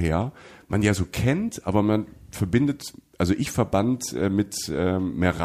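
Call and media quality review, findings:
No findings to report for this call and media quality review.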